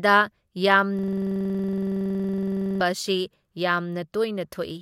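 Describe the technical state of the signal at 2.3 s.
At 2.3 s the sound is a rapid machine-gun stutter: one 46 ms fragment repeats about 21.5 times a second from 0.99 to 2.81 s. This is a system hang loop, where the system froze while the hardware replayed one ring buffer, consistent with 2048 samples.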